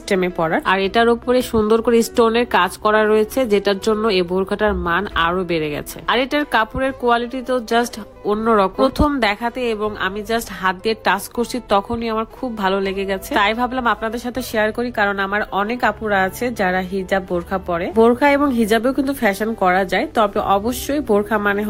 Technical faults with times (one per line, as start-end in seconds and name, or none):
none